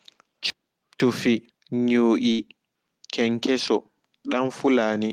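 Chunks out of order, from 0.5 to 1.5 s: two half-second blocks of the speech play in swapped order. The block that belongs at 0.5 s was delivered one block late, so it plays at 1.0 s, after the material that should follow it. Nothing is lost, but the sequence jumps forward, back, and forward again. There are hard joins at 0.5, 1.0 and 1.5 s, and the second of speech between them sounds jumbled.

Burst of packet loss, from 2.31 to 2.42 s: a short run of audio failed to arrive in time. The receiver covered the hole for about 71 ms by extending the last sound it had and letting it fade. A voiced sound at that point would become a held buzz, and an unvoiced one a dying hiss. Playback then resumes further along, with about 40 ms of the original speech skipped.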